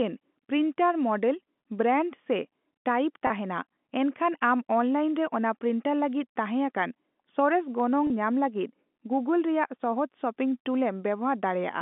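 Speech carried over a G.711 telephone channel, band-limited to roughly 200 Hz to 3.5 kHz, shows two short dropouts repaired by packet loss with pitch repetition, at 3.27 to 3.30 s and 8.07 to 8.10 s. Each gap lasts about 30 ms, which fits a single lost packet. The receiver fills it by repeating the last pitch period, so both spots sound like a brief, slightly held, buzzy note before the speech resumes.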